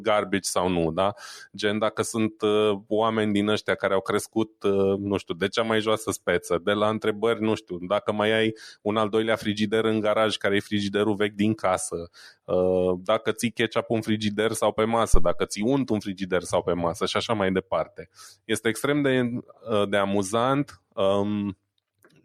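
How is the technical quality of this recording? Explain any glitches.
A single glitch mars the speech. At 15.14 s a deep phantom power thump lands, peaking near about -3 dBFS and dying away within roughly 50 ms, gone by 15.36 s. Switching the supply on a live input sends a voltage step through the coupling capacitors.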